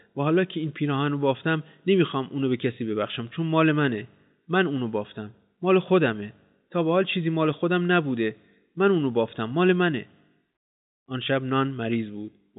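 Nothing goes wrong anywhere in this speech recording, which simply comes through in its narrow telephone-style band with no technical fault to point at.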